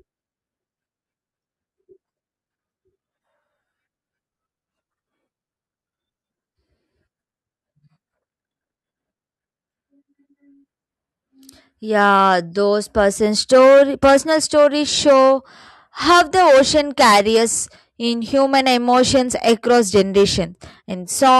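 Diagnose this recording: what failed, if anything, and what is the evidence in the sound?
Between 4.28 and 6.32 s there's a section at the wrong speed: the speech suddenly runs at about 0.89x, sagging roughly two semitones and dragging, then snaps back to normal. Because pitch and tempo drop together, it isn't a pitch-shifter. It's a rate mismatch, likely from that stretch being edited or played against the wrong sample clock, somewhere in the storage or playback stage, so the samples are read out slower than they were captured.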